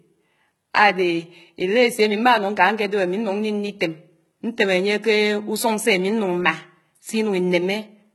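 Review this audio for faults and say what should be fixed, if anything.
Throughout the speech, s sounds come out gritty and lispy, with a brittle, heavily damaged top end. The likely cause is HE-AAC compression, which fits HE-AAC v2 at around 16 kbps. It rebuilds the treble by copying lower bands upward, so harmonics misalign at the crossover. On a spectrogram the upper band looks smeared and repetitive, with a hard ceiling at 11.8 kHz. To prevent it, encode at a higher bitrate with AAC-LC or another full-band codec, or distribute a lossless version.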